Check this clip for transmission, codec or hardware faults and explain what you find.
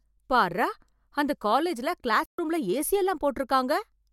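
One transmission fault stands out. From 2.26 to 2.39 s, right after "பார்ரா அந்த காலேஜ்ல", the speech drops abruptly into silence for about 130 ms and resumes at "ரூம்ல ஏசி". That is a digital broadcast dropout: the receiver muted while corrupted or missing frames arrived, which fits a handful of lost frames, and whatever was sent then is gone.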